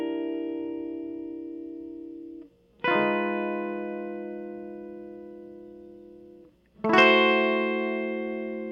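Nothing goes wrong anywhere in this bit of music, so there's no fault to point to at any moment.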